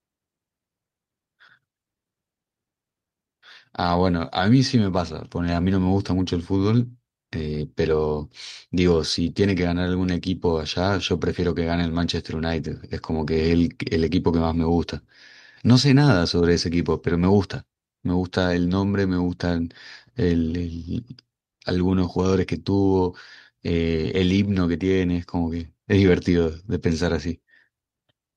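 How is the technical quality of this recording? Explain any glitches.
No glitches are audible anywhere in the speech recording, so there is nothing to explain.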